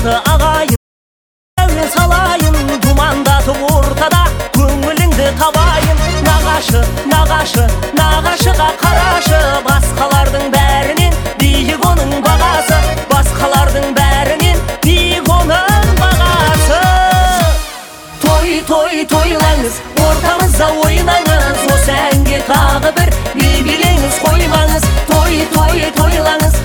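At 0.76 s the sound cuts off abruptly and drops into total silence, with no room tone or background noise underneath, until it resumes mid-flow at 1.58 s. That gap of about 0.81 s is an audio dropout to silence. The likely cause is a momentary loss of the input signal, such as a loose connection, a failed link or a brief mute, while the recorder kept writing silence, so whatever sounded during that stretch is gone.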